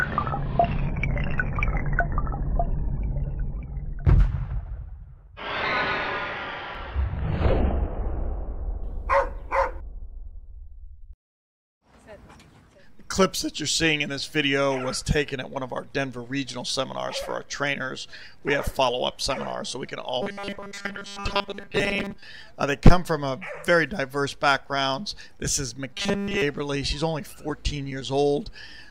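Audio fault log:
20.22–22.23 s and 25.93–26.43 s, robotic sound from repeated short buffers: new audio likely arrived too seldom, so playback filled the gaps by replaying the last stretch of about 5 ms, while roughly two thirds or more of the real audio in these spans was skipped. Looping a 5 ms block lays a fixed 200 Hz buzz over the sound. The result is a rigid, metallic tone that follows the original only loosely.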